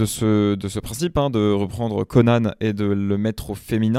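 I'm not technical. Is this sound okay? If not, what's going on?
Yes, nothing in this recording stood out as a problem when I listened to it.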